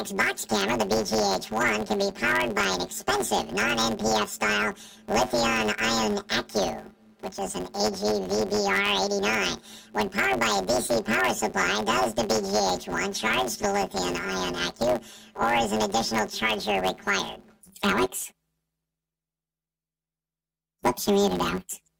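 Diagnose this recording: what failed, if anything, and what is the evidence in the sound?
A sample-format conversion error runs through the whole speech clip: planar audio read as interleaved. Each 10 ms block, holding all left samples and then all right, is taken as alternating pairs, so each half plays at double speed. With blocks this short, the sound becomes a robotic buzz at 100 Hz rather than an audible octave jump.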